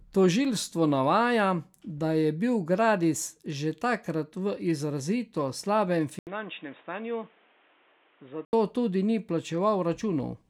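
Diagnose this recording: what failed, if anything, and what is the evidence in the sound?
Stage: the input device. From 6.19 to 8.53 s, speech turns boxy, with nothing above 3.8 kHz. An 80 ms gap marks the switch. Level drops a few dB over new noise, roughly 30 dB down. Likely an input switched to a poorer device.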